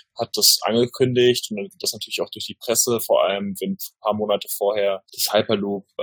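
No technical faults can be heard in the clip.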